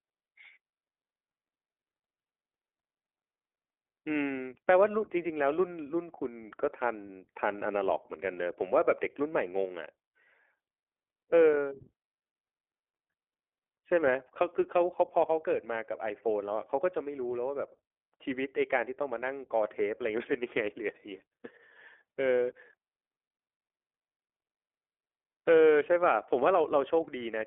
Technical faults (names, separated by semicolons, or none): iLBC codec